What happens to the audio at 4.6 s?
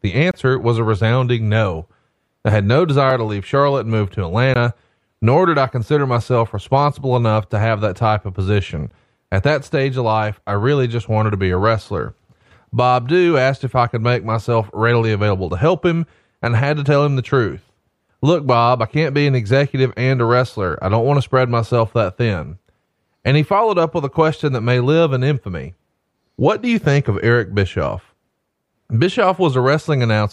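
A block of digital silence lands at 4.54 s, right after "and move to", lasting about 17 ms. For that stretch the output carried nothing but zeros, which fits the program failing to fill its output buffer in time. Because the sound drops straight to silence and returns with no fade, this comes across as a short hole in the speech.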